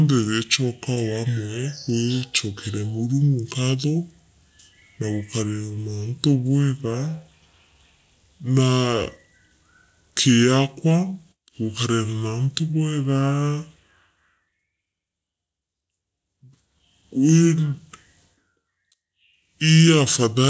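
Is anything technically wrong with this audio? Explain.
Yes. From start to finish the speech sounds slow, deep and sluggish, running at about two thirds of its natural speed and pitched about 7 semitones low. This is a wrong sample rate fault. The samples are being played back more slowly than they were captured, with no rate conversion, so timing and pitch drop together by the same ratio. The 2:3 ratio fits audio recorded at 24 kHz being played at 16 kHz.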